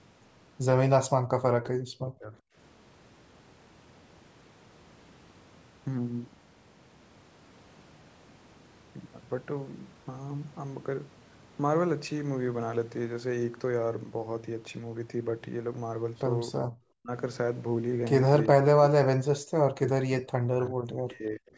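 Speech that dips sharply, by about 40 dB at its deepest, from 1.18 to 2.36 s, again briefly at 16.91 to 17.12 s, and from 18.53 s to the end, is speech suppressed in double talk, likely an echo canceller attenuating the talker while both sides spoke at once.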